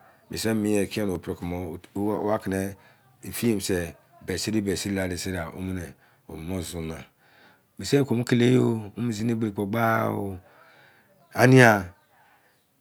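Two devices in the signal chain are likely running on separate clocks that disagree by a few hundred parts per million, so the buffer between them drifts until a small block of a few tens of samples is dropped or repeated. These clock drift buffer slips land in this speech clip as a regular click roughly every 2.01 s, from about 1.15 s to 11.2 s, with around seven clicks in total.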